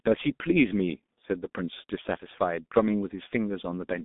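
From start to finish the speech carries G.723.1 codec damage, and it is heavy. Nothing survives above about 3.7 kHz, and the line band runs roughly 200 Hz to 3.6 kHz, so the speech is muffled and thin. The coarse, hoarse grain points to a rate near 6.3 kbit/s. The codec models the voice in long 30 ms frames and updates that model slowly, which blurs consonants. Plain telephone band-limiting would muffle the speech just as much, but without this roughness or the smeared transitions.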